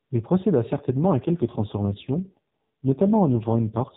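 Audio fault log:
0.72 s to end, AMR rate drop: from 0.72 s the speech turns rougher, buzzier and more synthetic, and stays that way to the end. There is no gap and no change in bandwidth, which remains capped at 4 kHz by the narrowband mobile codec. The codec has fallen to its lowest mode, a step down that fits a switch from 12.2 kbps to 4.75 kbps. Far fewer bits describe the excitation pulses in each frame, so the vocal-tract model is driven crudely.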